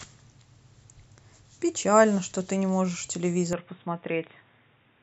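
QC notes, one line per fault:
3.53 s to the end: input switched to a poorer device. The speech turns abruptly dull and boxy, with nothing above 3.8 kHz, and this is likely a change of capture device in mid-recording, such as a headset's call profile. The narrower band strips the upper consonant detail, the level drops by around 5 dB, and a different, faint background noise appears, roughly 40 dB below the speech. There is no silence at the switch.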